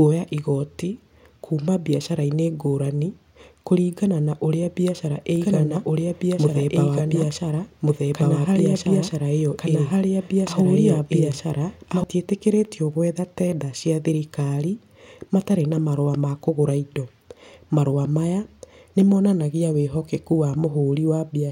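Speech with a doubled audio track from 5.36 s to 12.04 s, just after "kũringana na ũrĩa biacara": a dry, full-band second copy trails about one and a half seconds behind at roughly equal level, starting and stopping abruptly, likely from a slower duplicate capture path.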